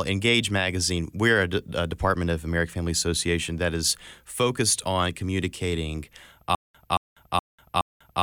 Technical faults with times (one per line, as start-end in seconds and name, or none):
6.55-8.22 stutter with silent gaps